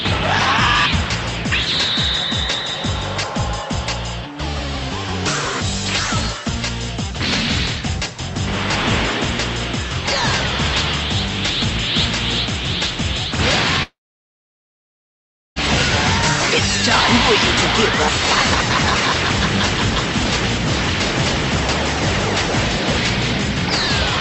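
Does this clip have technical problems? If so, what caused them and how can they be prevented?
Yes. From 13.83 to 15.58 s there is a long network dropout. The audio cuts off, a short concealment tail fades out, and 1.63 s of silence follows. Sound returns with 1.74 s missing. The likely cause is a sustained stall on the connection. A more stable network path, such as wired rather than wireless, prevents it.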